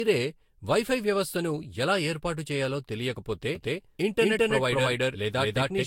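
Generation loss runs throughout: the speech sounds swirly and hollow, with blurred attacks and nothing above 16.6 kHz, likely from about three successive Vorbis re-encodes near 67 kbit/s. A doubled audio track starts abruptly at 3.55 s, right after "ఎలా ఏర్పాటు చేయాలో తెలియకపోతే", and lasts to the end. An equally loud, dry copy trails about a fifth of a second behind, likely from a second, slower capture path.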